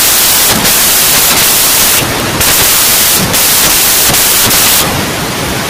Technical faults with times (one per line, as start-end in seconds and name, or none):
0.00-5.69 samples built from the wrong bytes